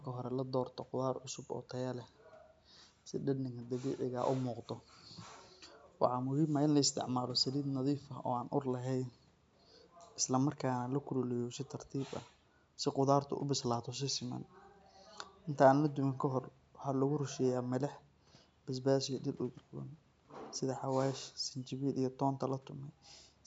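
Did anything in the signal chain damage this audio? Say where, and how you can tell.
No, the signal chain did no damage here: the speech carries the expected marks of call microphone processing, with the lowest bass rolled off by its high-pass filter, and that is not a fault.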